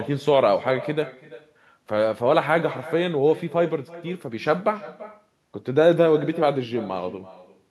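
Speech with echo and no canceller throughout: a quieter, thinner copy trails every phrase by roughly 300 ms at about 17 dB down. It is a distinct repeat, not a smeared room-reverb tail, so it points to the far end's loudspeaker feeding its microphone.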